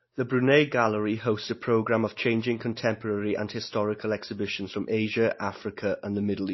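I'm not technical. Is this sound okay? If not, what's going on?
No. The speech was likely squeezed hard by MP3 compression, which saves space by throwing away detail the encoder judges unimportant. Here it discarded everything above about 5.8 kHz and kept switching faint parts of the sound on and off. Throughout the clip, from start to finish, that leaves the speech dull and muffled, with a watery, swirling quality, metallic chirps on s sounds, and blurred starts to syllables.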